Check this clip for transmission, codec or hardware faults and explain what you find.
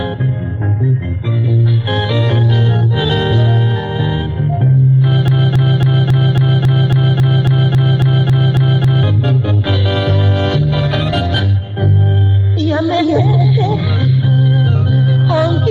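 One fault stands out: a broken-record loop from 5.28 s to 9.03 s. Over those three and three-quarter seconds, a 0.27 s fragment of the audio plays back to back 14 times, each pass identical, giving a stuttering, mechanical repetition. The likely cause is a player, encoder or stream that stalled and kept resending the last chunk it held, so whatever audio belonged in that stretch never arrives and is simply gone.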